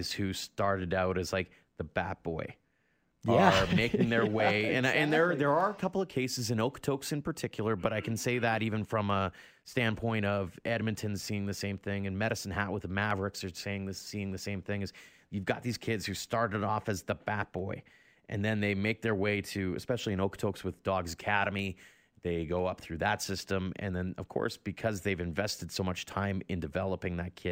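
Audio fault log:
0.12–27.1 s: periodic USB or driver dropouts. A background task stalls the audio path every 0.5 s, skipping a sliver well under a millisecond each time and leaving regular ticks in the speech.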